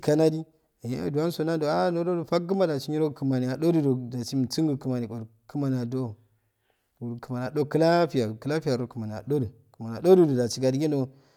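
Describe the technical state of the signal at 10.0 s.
At 10.0 s the speech signal is intact, with no technical fault at that moment.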